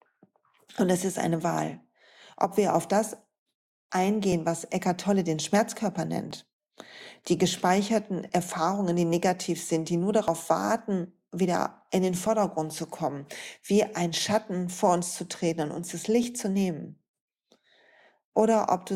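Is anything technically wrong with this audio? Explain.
Yes. There is overlap between stream segments at 2.33, 4.32, 6.31, 8.29, 10.28, 12.26, 14.25 and 16.23 s, about every 2 s, matching 2-second segments. Where one segment's time stamps overlap the next, the player discards the overlapping stretch even though that speech wasn't actually duplicated. About 5 to 12 ms of audio disappears at each joint, so the waveform jumps abruptly. This is heard as a short click or tiny skip that recurs at a steady rhythm through the speech.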